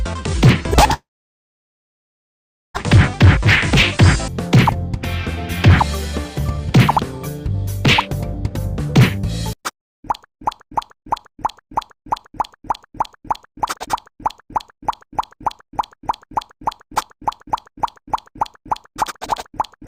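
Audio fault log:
0.93–2.81 s, long network dropout: sound trails off as a fading buzz, then near-silence; likely lost packets, and about 1.6 s never returns when audio resumes.
6.28–6.78 s and 7.18–8.51 s, jitter buffer speed-up: the receiver drains excess buffered audio by cutting pitch-period slivers, about 50 ms each time, so playback runs 109% then 104% fast at unchanged pitch.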